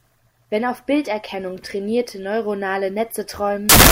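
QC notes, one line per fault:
3.69–3.92 s, samples built from the wrong bytes: right at the tail of the speech, the sound suddenly turns into a harsh blast of loud broadband noise that runs to the end. The bytes making up each sample were put together wrongly, so the fast-flickering low bits ended up as the big part of every value. That swamps whatever was there with noise.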